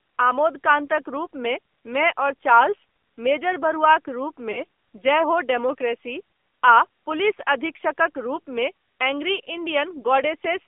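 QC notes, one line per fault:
throughout: AMR narrowband mobile codec. The speech sounds thin, buzzy and plainly synthetic, with a boxed-in band of roughly 300 Hz to 3.5 kHz. At 7.4 kbps, a vocal-tract model fed by a few pulses per subframe rebuilds each sound coarsely, and 8 kHz sampling passes nothing above 4 kHz.
4.52–4.63 s: lost AMR speech frames. Just after "मेजर बरुआक", the sound briefly dips or warbles, then returns weak or rough for a moment. The gap fits a single lost 20 ms frame. The decoder repeated the previous pitch and vocal-tract settings at reduced gain until good frames resumed.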